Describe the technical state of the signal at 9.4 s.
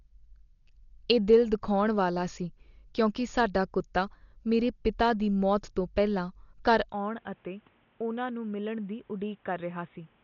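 At 9.4 s the speech sits inside a section running from 6.92 s to the end, where the input was likely switched to a poorer device. Just after "ਮੌਤ ਤੋਂ ਪਹਿਲਾਂ ਘਰ" the sound drops by roughly 10 dB with no silence at the changeover. The band now stops at 3.8 kHz and a new noise floor appears, roughly 35 dB below the signal. Together these give the narrow, boxy tone of a lesser microphone or a headset call profile.

Across the whole clip, including this moment, there is heavy damage consistent with Dolby Digital compression at a low rate, roughly 40 kbps. Nothing passes above 6.9 kHz because the encoder has narrowed its band to save bits. Many frequency lines that were given no mantissa bits are refilled with dither noise. The result is a dull, rough quality with a fluttering noise clinging to tonal parts. At 9.4 s this sits underneath the still narrower band of the switched input.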